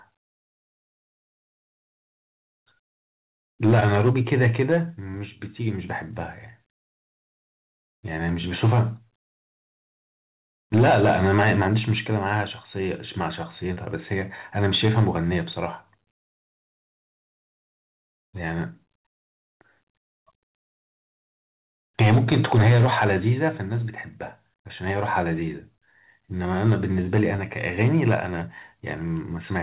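Short concealed packet loss turns up at 3.80, 13.73 and 27.36 s. Each time about 20 ms of speech, which fits one 20 ms packet, arrived too late. The decoder extended the previous sound to bridge the gap, leaving a quick smear or wobble.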